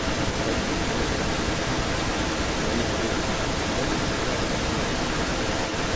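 Throughout the clip, the speech returns as a second copy about 0.32 s later, roughly as loud as the original. This echo leak likely comes from a far-end loudspeaker whose echo canceller let its microphone pickup back into the call.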